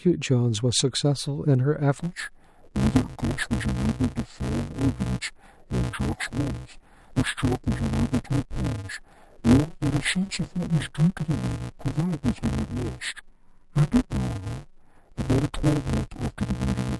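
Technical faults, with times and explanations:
1.99–17.0 s, interleaved audio read as planar: from here on, each short block of alternating left and right samples is split in the middle, with the first half sent to the left channel and the second half to the right. Every channel's samples are stretched to half speed within blocks of about 5.33 ms, which fits a 128-sample block. The speech keeps its pace but turns dull and robotic, buzzing at the 188 Hz block rate, with no clear drop in octave.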